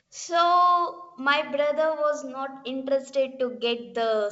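No faults are audible; the speech arrives through G.722 wideband telephone coding at 64 kbit/s, with nothing above 7.7 kHz and at most faint coding traces.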